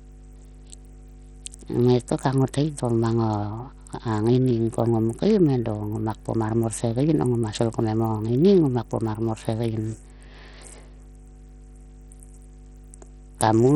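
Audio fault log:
Throughout: mains hum. A steady low tone at 50 Hz sits under the speech, roughly 25 dB below it. Power-line energy from a ground loop or nearby transformer has leaked into the signal path. It differs from rumble or wind noise because it holds one fixed pitch at the exact mains frequency and never wavers with the speech or the room.
Throughout: Bluetooth SBC compression. The speech is heavily damaged: the treble thins out and flickers in and out, while a gritty, granular noise and aliasing ride on the sound. This points to a starved sub-band coder, likely SBC at a low bitrate around 64 kbps, where the upper bands get few or no bits and the rest are coarsely quantised.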